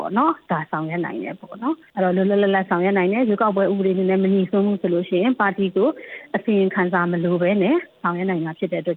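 No technical faults can be heard anywhere in this audio. There is nothing to point to at any moment in the clip.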